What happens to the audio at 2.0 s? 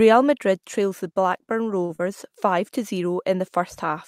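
A sound is held unnaturally long from 1.85 to 1.91 s. This is a short stall from a late packet: the jitter buffer ran empty, so the receiver stretched the last sound for 40 ms and resumed without losing anything. From 1.95 to 2.01 s a brief smear follows. This is short concealed packet loss: 40 ms never arrived, and the receiver filled the gap with 31 ms of continued sound before blending back.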